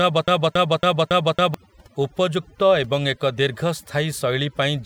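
From the first instant, and already under way when the clip begins, a broken-record loop runs until about 1.54 s. A fragment of roughly 0.28 s repeats exactly, back to back, five times, so the speech stutters mechanically in place instead of moving forward. The likely cause is a stall in the player, encoder or stream, which kept resending the last fragment it held; whatever speech belonged in that stretch is missing.

Across the whole clip there is overdone noise removal. The noise reduction was set too aggressively, so individual frequency bands that sit close to its noise estimate are pulled far down or switched off entirely, taking quieter components of the speech with them. Between phrases the background drops to near silence scattered with twinkling specks.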